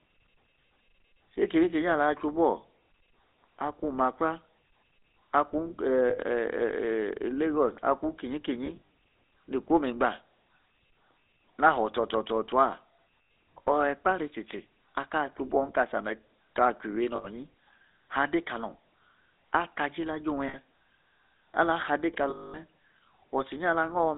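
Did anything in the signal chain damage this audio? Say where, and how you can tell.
Yes. The GSM full-rate codec stage has narrowed and roughened the whole clip. The speech carries a buzzy, gravelly texture and is confined to about 250 Hz to 3.7 kHz, which fits a 13 kbps full-rate stream. On a spectrogram, everything above about 3.7 kHz is empty and the harmonics look coarse and smeared.

Lost GSM frames on the network side cause brief metallic rings at 6.1–6.19, 8.66–8.82, 13.26, 17.16–17.27, 20.48–20.56 and 22.3–22.59 s. The 8.66 s event is broken into short dropouts. Each loss freezes the last good frame and repeats it. A spectrogram shows these as static horizontal bands.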